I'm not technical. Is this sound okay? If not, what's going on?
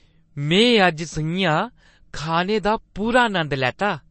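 No. All the way through this speech, the sound is dull and watery. Nothing above about 8.3 kHz is left, so s sounds lose their crispness. Quiet details flicker in and out, giving a swirly, metallic edge. The likely cause is MP3 compression squeezed too hard. To save space, the encoder cut off the treble and threw away the softer parts it judged unimportant. That damage is plainly audible here.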